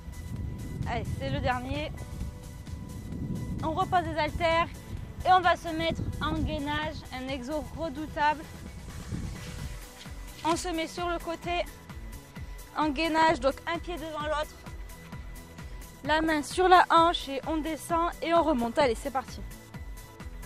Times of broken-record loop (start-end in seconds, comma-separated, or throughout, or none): none